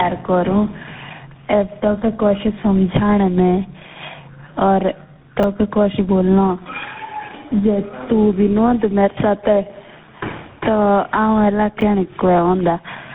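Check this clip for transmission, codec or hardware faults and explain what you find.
Yes, there are two kinds of fault here: tandem speech coding across the whole clip, and two brief spots of chunks out of order.

Tandem speech coding runs start to finish. The sound points to three speech codecs in a row, likely a GSM full-rate leg, then another GSM full-rate leg, then a CVSD link, with plain telephone conversions between them. Each coder reworks the previous one's damage, so the speech comes out rough, muffled and warbly, with nothing above about 3.8 kHz.

Chunks out of order show up at 5.4 to 5.44 s and again at 11.8 to 11.82 s. The audio seems to move in 10 ms blocks. In the first spot, one block lands about three blocks late. In the second, one lands a single block late. Nothing is missing, but the splices are hard, so you get a quick jumbled stutter. The first one is a bit longer.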